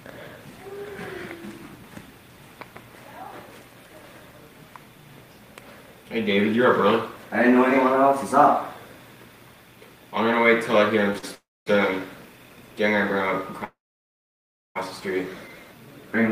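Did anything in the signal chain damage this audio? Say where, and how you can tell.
Yes. Network stage. A short stall from a late packet at 11.18 s holds the sound for 42 ms, then resumes. The jitter buffer briefly ran empty.

Call audio freezes occur at 11.35 to 11.68 s and 13.64 to 14.77 s. Each fades to silence, then resumes unbroken. Packets were likely delayed in transit.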